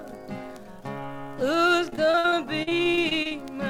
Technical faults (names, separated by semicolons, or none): repeated packet loss (robotic sound)